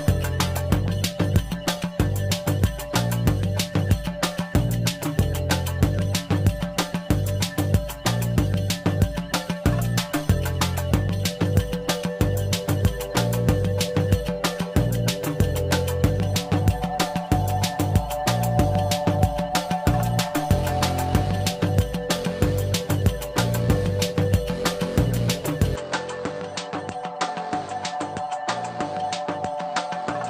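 Adaptive stream starting at a low bitrate, 0 to 2.0 s: the treble is thin and codec smearing is stronger, which fits Opus at about 24 kbit/s, until quality jumps up without a gap, consistent with about 64 kbit/s. Input switched to a poorer device, likely, at 25.76 s: with no gap, the sound turns dull, with nothing above 8.8 kHz, drops about 10 dB, and gains a new noise floor roughly 45 dB down through the end.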